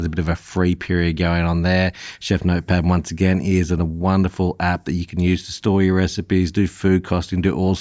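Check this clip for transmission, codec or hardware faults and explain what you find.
No faults found.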